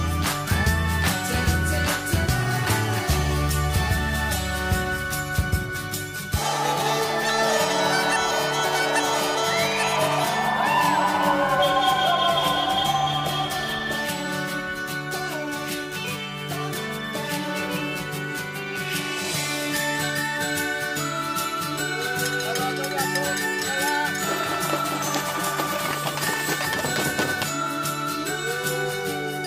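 There are no technical faults to describe in time order, because none occur anywhere in the audio.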